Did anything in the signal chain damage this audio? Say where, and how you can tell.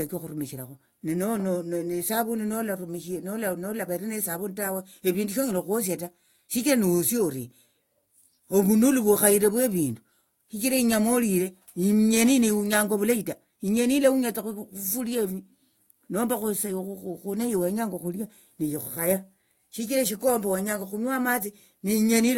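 Yes. The damage sits in the codec stage. At 1.36 to 1.38 s, a short chirp, squeak, blip or burst of noise cuts into the speech. It lasts about 24 ms and peaks at roughly -25 dBFS. That is a corrupt frame decoded. Flipped bits inside a few compressed frames were not caught, so the decoder played them anyway. Misread gains and codes placed energy at the wrong frequencies. The burst's length matches a few frames of codec data, which points to the decoder, not to analogue or network faults.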